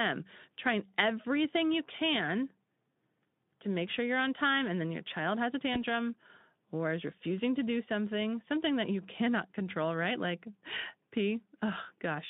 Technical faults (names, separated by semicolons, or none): VoIP packet loss concealed by the speech codec